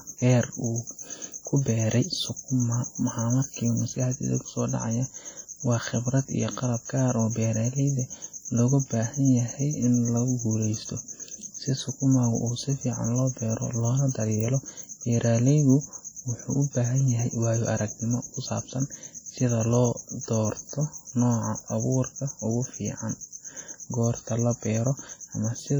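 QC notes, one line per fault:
throughout: WMA compression, likely. The speech sounds washy and ringing, with a hiss that swells and fades with the level. Quantisation noise smears across long transform blocks, and weak detail drops out. The heavy damage fits a low bitrate around 32 kbps.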